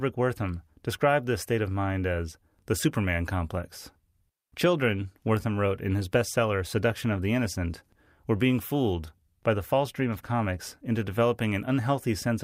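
No technical faults are audible.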